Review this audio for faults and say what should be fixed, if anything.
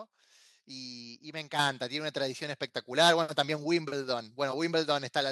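At 1.59 s the microphone volume steps up: the level of the whole signal jumps by about 7 dB in a single step, with speech and background noise rising together. That shared rise points to the input gain being raised at the device rather than anything changing at the source; the call software judged the microphone too quiet and adjusted its volume. Prevent it by disabling automatic microphone gain adjustment and setting the input level correctly before recording.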